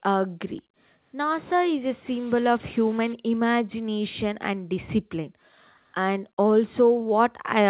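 From 2.11 to 3.13 s the speech becomes distorted, with noise filling the quiet gaps. This is likely a stuck bit in the sample data. On the waveform, values jump by a fixed step. The spectrogram shows broadband hash up to the 4 kHz ceiling of the call path.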